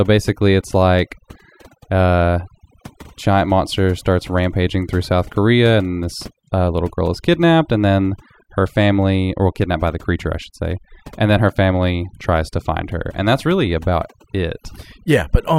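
A speech recording with overdone noise removal throughout: the noise reduction was set so strong that quiet voice components vanish, leaving near-silent, twinkling gaps.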